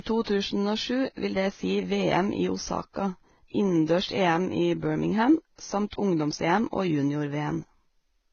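Transcoding between lossy codecs runs throughout this speech clip. Nothing reaches above 6.8 kHz, and the sound carries two different layers of coding damage at once: the artefacts of one low-rate encoder are heard together with those of another. The likely cause is a second lossy encode wasting bits on the first encode's artefacts and adding its own, consistent with a Vorbis stream near 17.6 kbit/s re-encoded to HE-AAC at about 20 kbit/s.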